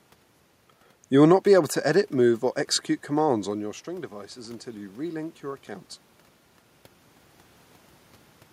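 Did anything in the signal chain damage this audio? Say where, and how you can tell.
Yes, the automatic gain rising in the call processing. Right after "edit move or execute" the level drops about 14 dB as the talker moves back. From 3.21 to 5.96 s the AGC slowly adds about 5 dB, so the room noise swells with the voice.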